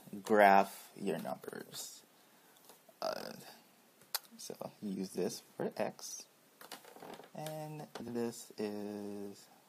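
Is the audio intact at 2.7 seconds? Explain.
No. From 2.65 to 2.74 s the sound garbles into a brief flutter: frames out of order, two roughly 46 ms blocks swapped and played in reverse sequence.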